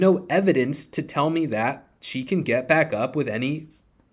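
Nothing in the speech stood out as a technical fault on listening.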